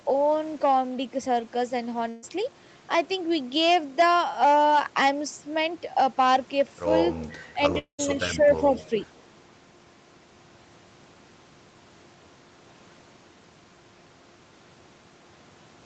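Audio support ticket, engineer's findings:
Burst of packet loss, 2.09–2.24 s. About 140 ms of sound gone, bridged by a held, fading continuation of the preceding sound. Jitter buffer concealment. Short and fully filled, with no silent stretch, unlike the later dropout.

Speech suppressed in double talk, 7.53–7.60 s and 8.35–8.76 s. Level dips by roughly 10 dB, briefly at first, then for about a third of a second. Likely the echo canceller ducking the near talker. A level drop, unlike a loss gap.

Long network dropout, 7.78–8.00 s. About 200 ms missing. Concealment fill decays, then roughly 100 ms of silence before the audio resumes further on. Likely a network outage outrunning the jitter buffer. The silent tail separates it from the shorter burst.

Echo leak, 8.76–8.89 s. Faint delayed copy of earlier sound, about 25 dB below the speech, lagging 418 ms. Likely residual loudspeaker echo passing a far-end canceller. 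The added repeated material, not a level dip, distinguishes it from the double-talk suppression just before.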